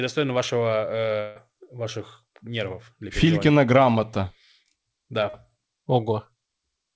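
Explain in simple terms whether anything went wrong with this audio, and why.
Two things went wrong on the way across the network. From 1.20 to 1.38 s there was likely a long network dropout: for about a sixth of a second no audio arrived. The receiver covered the whole gap by stretching out the last bit of speech, so instead of silence you hear a smeared buzz that fades. The speech then picks up again with that piece simply missing.

The second problem is a short concealed packet loss at 5.30 to 5.35 s. About 40 milliseconds of the call did not reach the decoder in time. The receiver patched nearly all of that hole by continuing the sound that came just before it, then blended back into the real audio. To the ear this is a brief smear lasting only a few hundredths of a second. The call codec carrying the audio passes nothing above 8 kHz, so the speech lacks its highest frequencies throughout.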